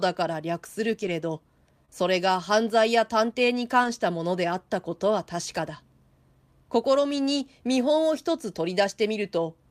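A lost packet rebuilt from error correction first appears from 0.99 to 1.09 s, where about 60 ms of speech is played from the low-bitrate backup copy that the following packets carried, which points to three 20 ms packets going missing. There is no gap, but the passage turns rougher and noisier.

A short concealed packet loss follows from 1.85 to 1.90 s. About 20 ms of audio never arrived, and the receiver bridged roughly 25 ms by extending the preceding sound before blending back into the real signal. It comes across as a brief smear or wobble.

The same error-correction rebuild returns from 3.84 to 3.90 s, covering about 40 ms, which suggests two packets, with the same grainy texture. A final single-packet instance from 5.56 to 5.58 s replaces about 20 ms and is heard as a roughening.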